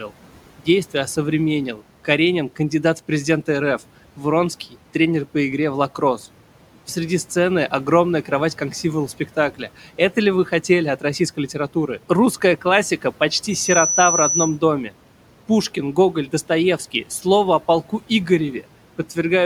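At 13.50 s the microphone starts picking up the loudspeaker it is feeding, and at 6 kHz the gain around that loop exceeds one, so the tone keeps feeding itself. The result is loudspeaker feedback squeal: a thin, piercing whistle that swells in roughly a third of a second to sit around 5 dB above the speech, holding until 14.58 s. The room noise, some 21 dB below the speech, is unaffected.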